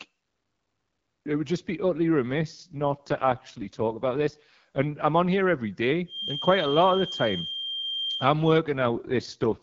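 From 2.30 to 4.91 s, starting just after "would just be utterly" and recovering before "I'm on here every", the speech turns rough, raspy and buzzy while the bandwidth stays the same and no gap appears. This is an AMR rate drop: the wideband codec's clear HD Voice character collapses in a way consistent with a step from 12.65 kbit/s down to 6.6 kbit/s. At that rate too few bits remain to model the vocal tract and pulse excitation cleanly.

From 6.05 to 8.31 s, just after "I'm on here every", a thin, steady whistle near 3.2 kHz sits behind the speech, about 10 dB below it and swelling and fading slowly in level. This is a feedback whistle, likely from a loudspeaker-to-microphone loop held just at the edge of feedback. That single frequency keeps ringing without building up.

A second AMR rate drop runs from 8.77 to 9.60 s. The same rough, synthetic quality returns, again pointing to a fall from 12.65 to 6.6 kbit/s.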